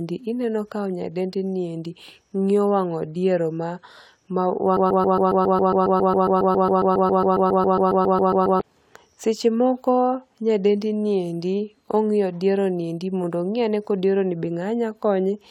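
At 4.77 s the playback or streaming chain most likely stalled and kept re-sending the last fragment it held, producing a broken-record loop. A slice of speech about 0.14 s long repeats exactly, back to back, 28 times until 8.61 s, giving a rapid mechanical stutter at roughly seven repeats per second. Nearly four seconds of the speech that should have played in that span is lost.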